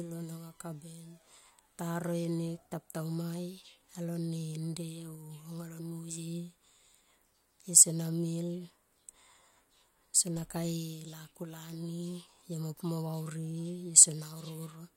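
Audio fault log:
No faults heard.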